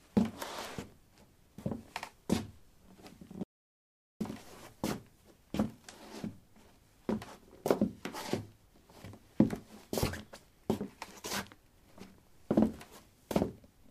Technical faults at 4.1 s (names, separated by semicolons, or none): audio dropout to silence